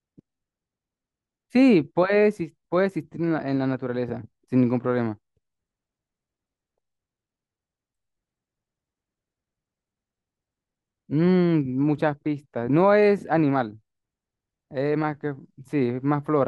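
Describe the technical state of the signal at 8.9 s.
At 8.9 s the speech signal is intact, with no audible fault at that point.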